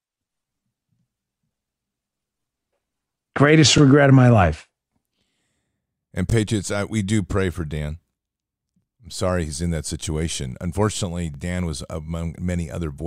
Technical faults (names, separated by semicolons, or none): overlapping chunks